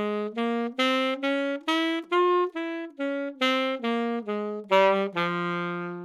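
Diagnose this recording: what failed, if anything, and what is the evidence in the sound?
Nothing failed; no fault is audible anywhere in this recording.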